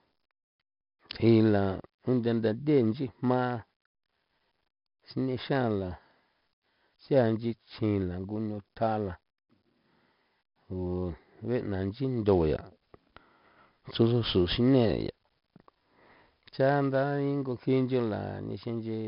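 Throughout the speech, 4-bit ADPCM compression leaves a gritty hiss riding on every louder syllable, rising and falling with the level of the sound, with roughness on sharp attacks where the adaptive step size lags behind the signal. Damage is heavy. Nothing remains above 5.3 kHz, which points to a low sample rate and gives the dull, muffled top. The bitrate is about 44 kbps.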